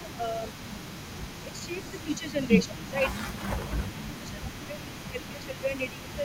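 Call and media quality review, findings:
Speech suppressed in double talk: level dips about 10–15 dB at 0.0–0.47 s, 1.44–1.81 s, 2.04–2.5 s, 2.68 s to end; likely echo canceller ducking near-end during overlap.

Echo leak throughout: faint delayed copy about 20 dB below speech, 152 ms behind; likely far-end loudspeaker echo not fully cancelled, returned to line.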